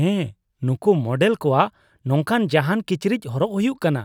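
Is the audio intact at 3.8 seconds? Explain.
Yes, the audio is intact at 3.8 seconds, with no audible fault at that moment.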